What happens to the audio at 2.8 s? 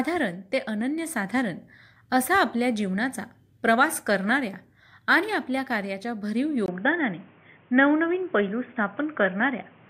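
Nothing goes wrong at 2.8 s; the speech carries on intact through that moment with no dropout, click, distortion or other audible fault.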